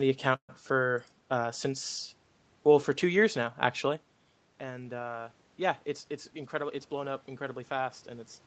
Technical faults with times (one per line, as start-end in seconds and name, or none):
0.35-0.51 call audio freeze
4.61-8.39 automatic gain rising
5.87-7.01 jitter buffer speed-up